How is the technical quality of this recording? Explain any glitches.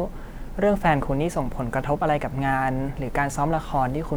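The speech recording has no technical glitches; the signal is continuous and intact throughout.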